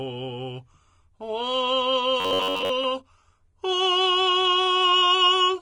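From start to finish the music carries plainly audible Vorbis compression artefacts, likely from low-bitrate encoding. Treble sounds hissy and grainy, attacks blur, and a spectrogram shows an empty band above the lowered cut-off with speckled, noisy energy just beneath it.

From 2.20 to 2.70 s a robotic sound from repeated short buffers takes over, likely from audio arriving too slowly and a roughly 10.7 ms fragment being looped over most of that stretch. It imposes a rigid metallic buzz at 93.8 Hz, visible as evenly spaced harmonic stripes and a periodically repeating waveform.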